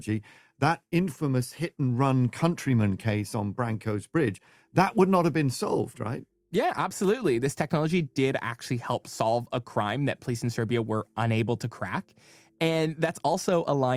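A short speech recording, with no technical fault audible anywhere in it. Nothing in the signal calls for a time or a cause to be given.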